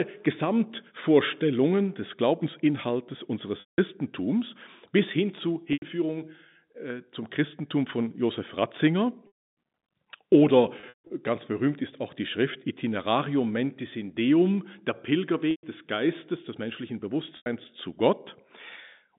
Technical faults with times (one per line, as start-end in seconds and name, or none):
3.60-3.78 packet loss with pitch repetition
5.73-5.82 packet loss with pitch repetition
9.27-9.41 packet loss with pitch repetition
10.80-11.10 packet loss with pitch repetition
15.51-15.63 packet loss with pitch repetition
17.37-17.46 packet loss with pitch repetition